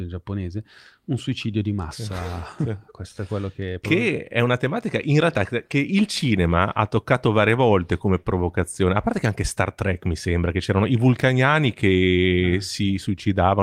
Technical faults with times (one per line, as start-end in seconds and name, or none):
none